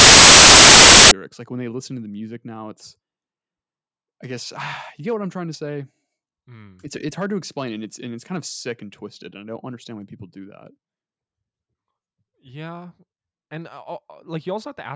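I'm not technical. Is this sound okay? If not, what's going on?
No. For the first 1.11 seconds there is a harsh blast of loud static that cuts in and out abruptly. This is file tags played as audio: the file carries a cover picture stored alongside the sound, and the player mistakenly read that picture data as if it were sound. Because picture data is compressed and looks random, it comes out as very loud hiss.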